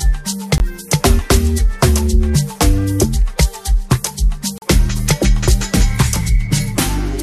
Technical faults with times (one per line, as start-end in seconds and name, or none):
0.58-0.60 block of digital silence
4.58-4.62 block of digital silence